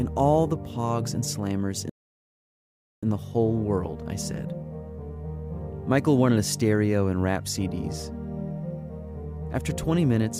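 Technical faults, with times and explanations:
1.90 to 3.03 s, playback stall: the sound cuts out mid-flow and the output stays silent for about 1.13 s before it carries on. The gap most likely comes from the player running dry of buffered data or its thread being blocked.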